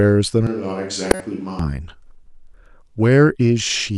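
From 0.47 to 1.59 s the speech turns roomy, thin and a few decibels quieter, likely a switch to a distant microphone, with a raised noise floor and smeared reverberant tails on the spectrogram. Between 1.11 and 1.21 s a corrupt frame was decoded: damaged data across a few frames yields a harsh burst, seen as a waveform spike and misplaced broadband energy.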